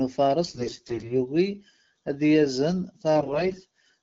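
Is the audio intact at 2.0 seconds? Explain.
Yes, the speech at 2.0 seconds is intact, carried cleanly by the AMR wideband (HD Voice) codec at 12.65 kbit/s.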